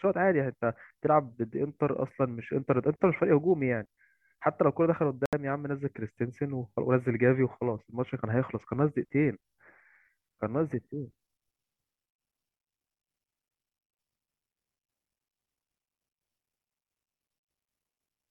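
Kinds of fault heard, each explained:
Bluetooth stall: the speech drops to 71 ms of silence from 5.26 to 5.33 s and then carries on, likely because delayed wireless packets let the headphone buffer run empty. Unlike a concealed packet loss, nothing is smoothed over. There is just a clean gap.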